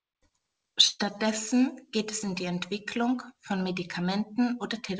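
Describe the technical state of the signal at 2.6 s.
At 2.6 s the audio is caught in a block size mismatch (truncated) that runs through the whole clip. One stage writes blocks slightly longer than the next stage reads, which fits 1024-sample blocks, and the tail of each block is discarded. Each cut leaves a small discontinuity, so a buzz at 46.9 Hz sits under the speech. So little is dropped that the pace and pitch stay at normal speed. The call codec's band limit, nothing above 8 kHz, is also audible.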